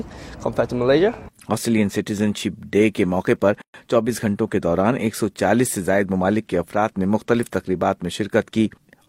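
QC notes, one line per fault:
3.62 to 3.74 s, gap at a join of encoded pieces: sound stops abruptly for about 123 ms, then resumes where it left off. Untrimmed encoder delay and end padding remain.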